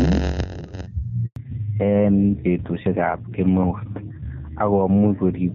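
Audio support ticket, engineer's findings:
Gain pumping, whole clip: level swing around 5 dB, dynamics squashed. Likely input gain set too high with a fast limiter or compressor clamping every peak.

Block size mismatch (padded), 0.00–0.87 s: steady 91.9 Hz buzz, speech running at 0.919 speed with timbre unchanged. Writer stage producing shorter blocks than the reader consumes, with zero padding filling each block remainder.

Handover gap, 1.26–1.36 s: speech fades within tens of milliseconds, then silence before audio resumes, 100 ms in all. Network handover with no speech frames delivered during the switch. Content in that window is lost.

Fallback to narrowband, 1.36 s to end: nothing above 4 kHz, speech duller and rougher. Before this point AMR-WB codec damage is faint at most. The quality drop is consistent with a codec downgrade from AMR-WB at 23.85 kbit/s to AMR-NB at 5.9 kbit/s.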